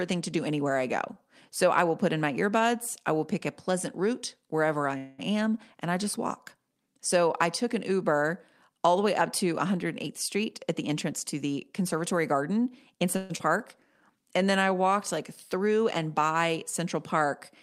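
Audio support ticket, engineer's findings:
Call audio freeze at 4.97–5.20 s, between "pleasant route wherever I" and "am and I just". Last sound held as a fading buzz or hiss for about 0.21 s, then speech resumes where it stopped. Nothing lost. Likely cause: late packets draining the jitter buffer, so the receiver stretched the final sound. Second call audio freeze at 13.17–13.32 s, about 0.13 s of fill. Likely same mechanism. Each adds its length to the delay.

Jitter buffer speed-up at 10.07–10.43 s, after "the way up to", before "at the". Speech at 111% speed, pitch unchanged, hurried. Roughly 50 ms trimmed. Second speed-up at 10.90–13.16 s, 106% speed, roughly 150 ms trimmed. Buffer was over target. Receiver cut short pitch-period slices repeatedly to shed delay.

Skip ahead at 13.38–13.41 s. Audio jumps forward. Roughly 0.1 s of speech missing, joined by only a 16 ms bridge. A stretch dropped, in transit or by the buffer, while later audio was queued. 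Comes just after the second freeze, clawing back delay.

Jitter buffer slow-down at 14.16–14.82 s, ending just before "like through and by". Speech at 89% speed, same pitch, drawn out. 82 ms added. Buffer running low. Receiver repeated single pitch periods to rebuild reserve.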